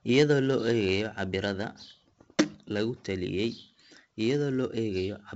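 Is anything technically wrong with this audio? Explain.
Yes. The speech carries 4-bit ADPCM compression from start to finish. Each sample is coded as a small 4-bit step from a predicted value, and the step size adapts as it goes. The coding error rides along with the level, so every loud syllable brings a gritty hiss, and sharp onsets distort where the step cannot grow fast enough. The damage here is heavy. Nothing is heard above 7.8 kHz, which dulls the sound and fits a 16 kHz sample rate at 64 kbps.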